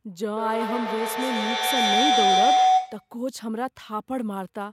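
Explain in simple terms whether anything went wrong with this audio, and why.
Yes, something went wrong: a feedback howl runs from 0.37 to 3.18 seconds. Two devices in the same room were on the call, so sound looped from loudspeaker into microphone repeatedly, growing each trip into a tone around 700 Hz, pulsing roughly every 150 ms.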